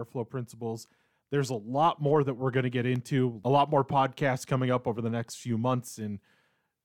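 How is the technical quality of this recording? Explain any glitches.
One glitch stands out in this speech recording. From 2.47 to 3.20 s, four CD scratch ticks occur. A disc scratch beats error correction on each rotation, leaving clicks, the longest about two milliseconds long.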